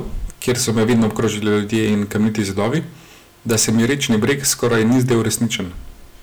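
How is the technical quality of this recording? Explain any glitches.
The recording is marred by hard clipping across the whole speech clip. The level runs about 12 dB hotter than the stage can pass, so every peak is sliced flat, and a small share of samples, around one in fourteen, sits pinned at the limit. Those squared-off tops spray harmonics high into the spectrum, giving loud syllables a gritty, crackling fuzz. Unlike gentle saturation, the harshness switches on abruptly at peaks rather than thickening the sound smoothly.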